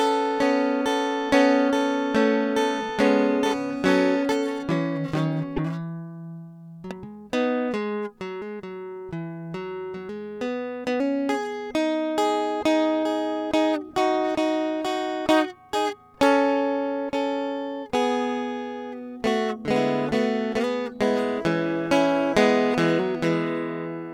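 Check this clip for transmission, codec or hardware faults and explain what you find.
Two faults stand out in this music clip.

From 5.53 to 5.59 s the sound briefly breaks up. This is damaged data in a compressed stream: corrupted bytes made the decoder lose sync and hunt for the next frame header.

From 21.04 to 22.54 s a steady, raspy buzz sits roughly 30 dB under the music. This is mains buzz: switching spikes twice per 60 Hz cycle spread harmonics into the kHz range.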